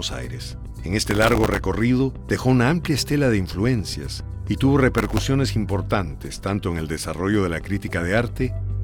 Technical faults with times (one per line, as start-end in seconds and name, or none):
1.11-1.58 processor overload crackle
4.94-5.25 processor overload crackle